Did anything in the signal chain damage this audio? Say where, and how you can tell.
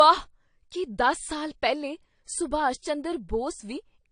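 Yes, at the codec stage, throughout the speech: nothing above 9.5 kHz, with the smeared texture of a low-bitrate encode. This is likely low-bitrate audio saved at a high bitrate, perhaps a 32 kbit/s AAC source re-encoded to 256 kbit/s MP3, which cannot restore the discarded detail.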